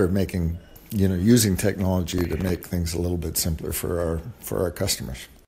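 A short piece of audio with one clear problem: processor overload crackle from about 2.11 to 2.70 s. For a bit over half a second there's a gritty, tearing crackle riding on the sound. It's what you get when the processor can't fill its tiny buffers, roughly 1.5 ms each, in time. A few dozen deadlines slip past in a row, and each miss drops in a sliver of silence with hard edges. The crackle clears as soon as the load eases.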